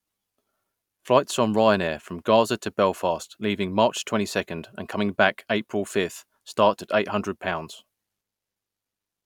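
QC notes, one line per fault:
No faults heard in this speech recording.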